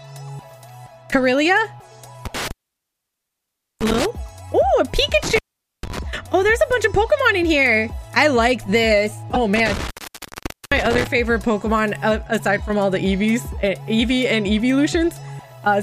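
From 2.25 to 4.05 s an intermittent contact opens the line for about 1.29 s. A loose plug or cable breaks the circuit, so the sound drops out with crackle at each edge and only faint hiss remains. A codec fault gives no crackle at the edges and leaves no hiss.

Inside that gap, at 3.80 to 3.82 s, a corrupt frame is decoded across a couple of frames. Damaged bits put energy at the wrong frequencies, producing a brief error peaking around -10 dBFS.

The contact opens again from 5.23 to 5.99 s, for about 0.45 s.

Another corrupt frame, a single one, is heard at 9.34 to 9.37 s, louder at about -5 dBFS.

A third contact dropout runs from 9.56 to 11.07 s, with the line open for about 0.84 s.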